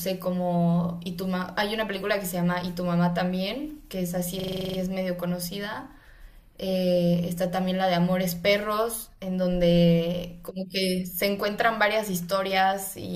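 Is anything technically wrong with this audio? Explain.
Yes. From 4.40 to 4.78 s the speech jams into a rapid, mechanical stutter: a fragment about 43 ms long repeats nine times at about 23.4 Hz, giving a machine-gun rattle before normal playback resumes, with essentially nothing missing afterward. This is a system hang loop. The computer or audio driver briefly froze while the sound hardware kept replaying the same ring buffer, whose length fits a 2048-sample buffer.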